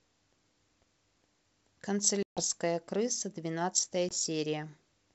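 From 1.17 to 1.31 s there is processor overload crackle: the processor kept missing its deadlines for short buffers, which sounds like roughly ten-millisecond blocks being skipped in a rapid run, perhaps a dozen or more. The speech turns gritty and torn with hard-edged crackle, then clears.

From 2.23 to 2.41 s comes packet loss on an ADPCM call. About 140 ms of audio is gone, replaced by hard-edged silence. Because the decoder's predictor and step size have drifted from the sender's, the speech comes back slightly distorted before settling. A shorter loss of about 20 ms at 4.09 to 4.14 s leaves the same kind of gap and uneven return.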